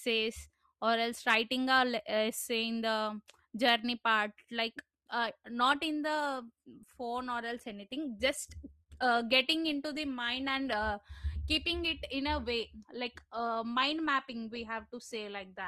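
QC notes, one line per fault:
5.21 s to end: adaptive stream at a lower bitrate. Quality changes suddenly and artefacts rise, with no gap. This fits a stream switching from about 64 down to 24 kbit/s Opus.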